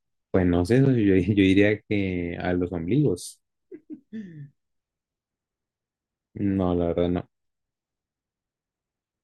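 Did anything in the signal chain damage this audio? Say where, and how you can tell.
No, nothing in the signal chain damaged this audio, so there is no stage to point to.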